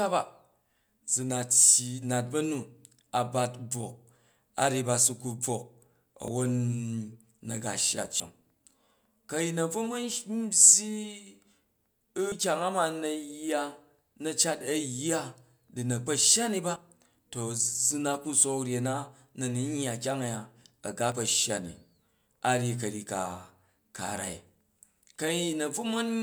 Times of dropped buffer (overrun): 6.28, 8.20, 12.32, 16.76, 21.12

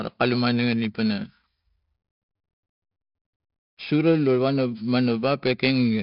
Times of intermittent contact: none

